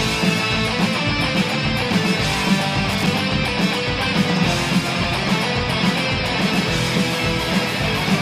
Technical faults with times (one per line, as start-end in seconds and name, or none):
2.91-3.07 loose connector crackle